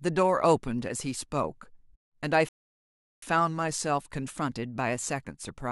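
At 2.49 s the speech stops dead and falls into silence. This is a rebuffering stall. The player used up the audio it had downloaded and had to wait for more data. Nothing plays until 3.23 s. Then the speech picks up at exactly the point where it broke off. No part of the speech is skipped or repeated. The gap simply adds about 0.74 s to the clip's running time.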